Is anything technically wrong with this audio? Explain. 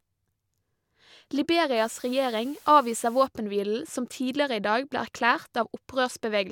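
Yes. From 1.76 to 3.26 s the speech was requantised to a low bit depth with dither: the samples were cut to 8 bits, and a small random signal was added before rounding. Without dither, that rounding error would follow the waveform and sound like grainy distortion. The dither instead turns it into random, signal-independent error. The result is a steady, even white hiss sitting about 25 dB below the speech, with no harshness on the speech, until normal resolution returns.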